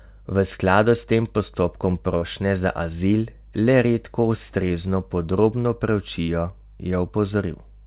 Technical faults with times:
2.18-2.24 short concealed packet loss
4.68-4.72 short concealed packet loss
6.22-6.30 burst of packet loss

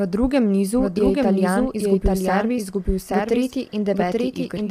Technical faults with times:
0.00-4.71 doubled audio track
0.00-4.71 low-delay AAC compression

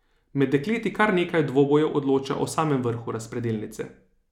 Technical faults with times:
none

